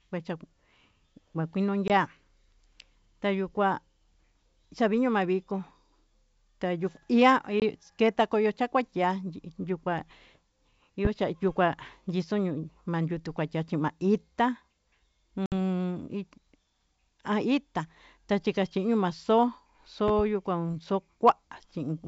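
At 1.88 s and 7.60 s the speech drops into a hard-edged 20 ms silence, one lost packet each time, and at 15.46 s a 60 ms hole swallows about three packets. This is packet loss on an ADPCM call. Unlike a plain dropout, the speech comes back with brief slight distortion until the decoder's predictor and step size realign. The wideband G.722 sound carries the speech between these gaps.

At 11.05 s a single loud pop lands about 15 dB above the speech. At 20.08 s two pops arrive in quick succession, about 10 dB above it. The speech carries on unbroken underneath, which sets these apart from the gaps. The cause is likely a voltage step from a plug, switch, static or driver glitch.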